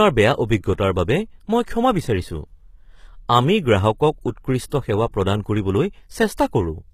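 A speech clip, likely passed through HE-AAC compression at a low rate, fitting roughly 20 kbps, leaves treble rebuilt from copied lower bands, so sibilants sound gritty and metallic, with nothing above 14.9 kHz. The transform codec spreads quantisation noise backward from sharp onsets, causing pre-echo: a brief hiss smears ahead of attacks from 4.69 to 4.72 s and at 6.37 s.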